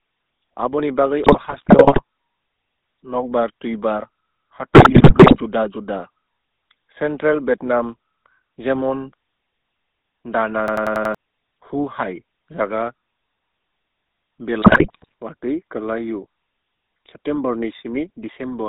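Across the whole clip the speech runs through the GSM full-rate codec. It sounds like 13 kbps GSM. The vocal tract is rebuilt from a filter driven by a coarse pulse excitation, which gives the voice a buzzy, gravelly grain. The line band runs from about 250 Hz to 3.7 kHz, so the lows are thin and nothing bright survives. The damage is plainly audible. Unlike plain band-limiting, the roughness sits inside the voice itself.

From 1.24 to 2.01 s, and again from 4.74 to 5.37 s, come GSM bit errors. Corrupted bits reached the decoder and spoiled the filter, pitch and gain parameters frame by frame. The voice breaks into squawks, pops and gargling. The second burst is denser, which fits an error rate of a few percent. What sets these apart from packet loss is that the sound is mangled rather than muted or smoothly concealed.

Between 10.68 and 11.15 s a system hang loop takes over. The host froze while the audio hardware kept replaying its ring buffer. 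One 92.9 ms slice, which fits a 4096-sample buffer, repeats five times at 10.8 Hz, giving a rapid machine-gun stutter. About half a second of real audio is lost. Unlike the decoder garbling, every repeat is identical and clean apart from the codec grain.

From 14.62 to 15.13 s GSM bit errors return. It is another short run of squawking, popping distortion from corrupted frame parameters.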